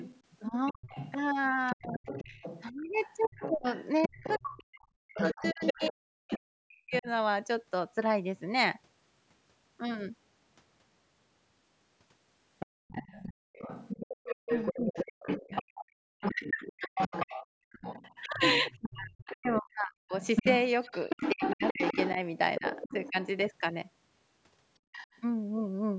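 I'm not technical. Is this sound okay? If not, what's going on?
No. A second voice can be heard under the talker. That is the other side's voice leaking through, likely because their loudspeaker sound reached the microphone and the echo canceller missed it. It runs from the start to 6.98 s, fairly quiet, and from 12.59 to 23.1 s, nearly as loud as the talker. A faint scrap returns at 24.92 to 25.18 s.

The talker's own voice also keeps dipping, dulling or cutting out. This is speech suppressed in double talk. It happens from 0.49 to 7.07 s and from 14.15 to 23.17 s, about three seconds in each stretch. Both sides were likely talking at once, and the canceller turned everything down.

The room's background sound also drops away briefly, almost to silence. This is background gated by the echo canceller, which shut the microphone hard while the loudspeaker played. It happens for under half a second from 12.66 to 13.53 s, for a third of a second at 15.63 to 16.02 s, and briefly at 24.8 s.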